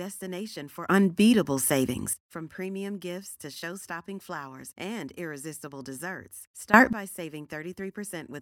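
Speech with two sudden gain jumps. From 0.89 to 2.13 s the level steps up by about 14 dB, and from 6.74 to 6.93 s by about 20 dB. Voice and background noise rise together instantly. The likely cause is a digital gain change applied without a ramp.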